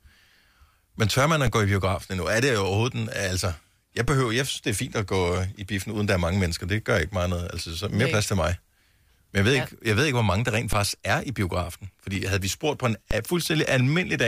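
At 1.47, 4.08, 10.73 and 13.11 s the speech picks up a DC step: the waveform's zero line suddenly jumps by about -14 to -13 dBFS, then drains away through a 20 Hz high-pass. Each one lands as a short low thump under the unchanged voice.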